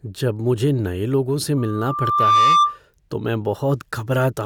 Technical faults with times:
1.57-2.79 loudspeaker feedback squeal

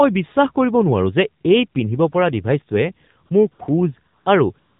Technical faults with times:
0.00-4.79 AMR narrowband mobile codec
3.26-3.60 AMR comfort noise
4.18-4.26 AMR comfort noise
4.60-4.79 AMR comfort noise

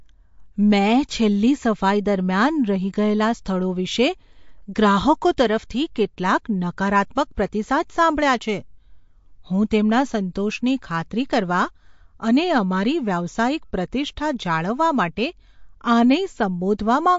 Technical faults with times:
0.00-17.19 MP3 compression

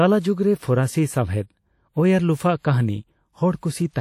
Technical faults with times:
0.00-4.01 WMA compression

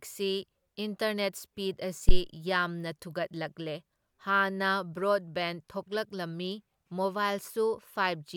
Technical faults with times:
2.09-2.22 phantom power thump

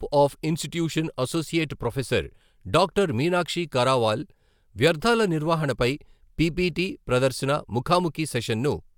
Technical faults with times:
none

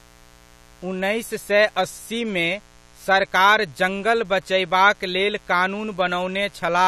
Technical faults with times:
0.00-6.88 mains buzz

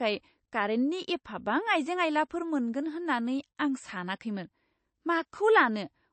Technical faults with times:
0.00-6.13 MP3 compression

